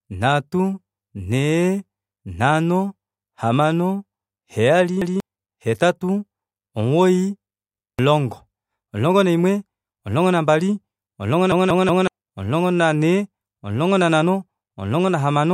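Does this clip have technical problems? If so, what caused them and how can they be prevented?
Yes, there are repeated buffers. A chunk of about 186 ms plays twice at 5.02 s, just before "hetatu omugoyi", and again at 7.80 s, right after it. Then, after "naimwe omulongo nambali omulongo", it loops three extra times from 11.52 to 12.07 s, giving a hard-edged stutter. New audio didn't arrive in time, so the device replayed its last buffer (the length fits an 8192-sample buffer), losing about 0.2 s of real audio at each of the first two and about half a second at the third. Keeping more audio queued ahead and giving the playback thread higher priority should stop it.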